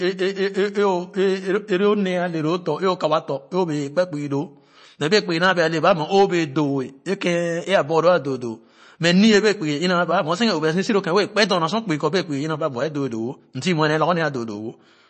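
Throughout the speech, the sound is watery and swirly, with chirpy, metallic s sounds and nothing above about 8.3 kHz. This is likely MP3 compression at a low bitrate, around 32 kbps, where the encoder cuts the treble and drops weak frequency components frame by frame.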